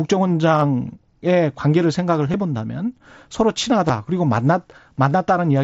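Concealed Bluetooth headset packet loss occurs at 2.32 s, 3.88 s and 5.10 s. Each time, about 15 ms of the speech was lost between headset and phone, consistent with two dropped packets. The receiver patched each gap by repeating a closely matching stretch of the preceding waveform, so each loss is a brief buzzy tone with a small warble where the speech returns, within the mSBC wideband signal.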